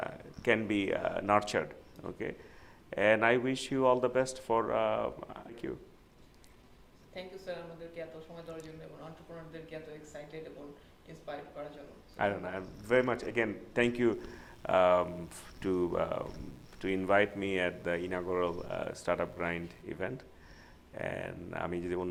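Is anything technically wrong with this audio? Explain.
Yes, there are three faults.

At 5.49 s there is a skip ahead: about a second of audio was discarded while later packets were already queued, so playback jumps forward with almost no gap.

From 5.86 to 8.19 s a jitter buffer speed-up plays the audio at 113% speed by repeatedly cutting short pitch-period pieces, roughly a third of a second in total. It sounds hurried but keeps its pitch.

From 14.14 to 19.82 s there is mains buzz at about 30 dB below the signal. Switching spikes at twice the 60 Hz mains rate produce harmonics reaching into the kilohertz range, heard as a steady, raspy buzz.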